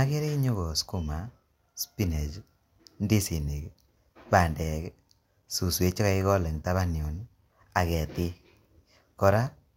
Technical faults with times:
none

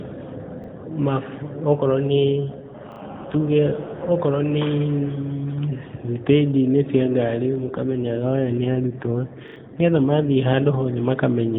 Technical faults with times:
0.64-0.68 repeated buffer
2.08-4.12 AMR rate drop
2.92-3.00 repeated buffer
7.56-10.37 AMR rate drop
9.48-9.56 repeated buffer

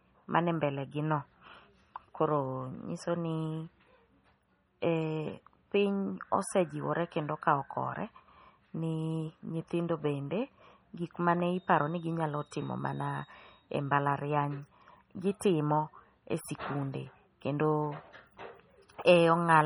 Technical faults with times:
0.00-19.66 MP3 compression

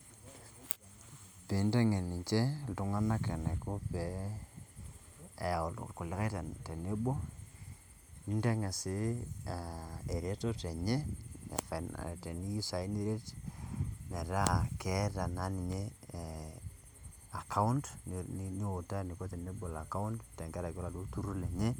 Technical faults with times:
none

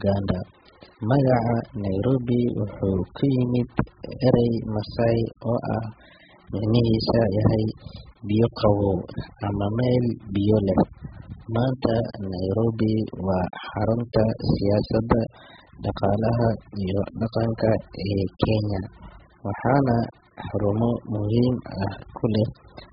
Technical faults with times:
0.00-22.93 AAC compression

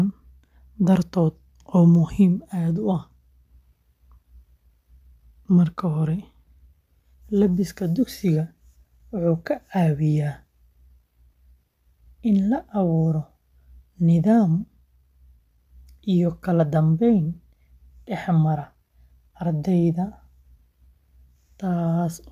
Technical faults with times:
none

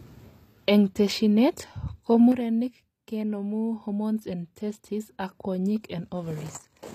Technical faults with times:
0.00-6.95 HE-AAC compression
2.32-6.95 one channel drops out

